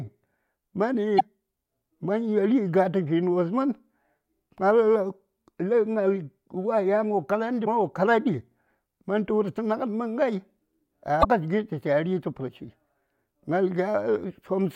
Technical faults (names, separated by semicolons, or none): damaged data in a compressed stream